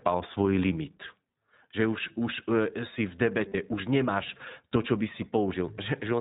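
The whole clip of speech passes through the iLBC codec. This narrowband coder discards everything above 4 kHz, so the sound is muffled and lacks air. Each frame's excitation is coded on its own, and the codec damage is plainly audible. The voice sounds slightly rough and synthetic. The texture fits iLBC's 20 ms frame mode at its higher rate of about 15 kbps.

From 3.48 to 3.56 s there are lost iLBC frames. About 60 ms of packets went missing, which fits three lost frames. The decoder filled the hole by repeating the last pitch cycle, blended with noise. This is heard as a brief held vowel, slightly buzzy or breathy, where the speech should move on. Because each iLBC frame stands alone, the voice recovers almost at once after 3.56 s.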